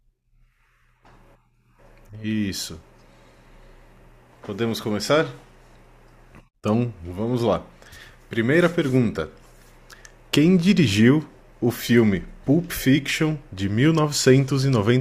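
From 0.51 s to 14.9 s the speech carries a regular tick every 0.6 s, about thirty in all. That steady rhythm is the signature of clock drift buffer slips. Two clocks are likely out by roughly 300 ppm, so a handful of samples gets dropped or repeated at each slip.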